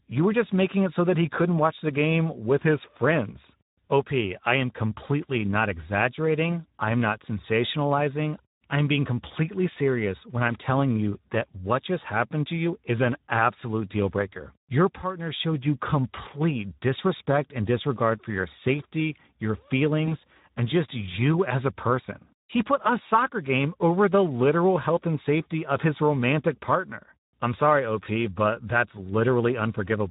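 A speech recording runs through the Speex codec for its whole length. The damage is plainly audible. The voice sounds hoarse and grainy, because the codec has too few bits to describe the excitation behind each sound. Any band above 8 kHz is only a shaped noise fill, not real detail. The coarseness points to a bitrate around 11 kbps, a middle-to-low Speex setting. At 20.05 s, just after "for your safety your", there is VoIP packet loss concealed by the speech codec. The gap is short and fits a single lost 20 ms frame. The decoder fills it by repeating its last pitch and filter at falling gain. That makes a brief buzzy or noisy smear. Recovery drags until about 20.15 s, before "and just you as", because each new frame builds on the guessed one.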